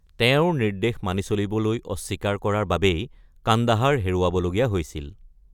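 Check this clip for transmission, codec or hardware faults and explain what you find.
Nothing to flag here; a careful listen through the speech turns up no faults at all.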